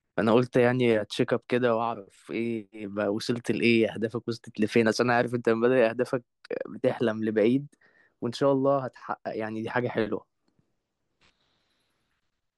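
No technical faults are audible anywhere in the speech recording, with the signal holding steady and intact throughout.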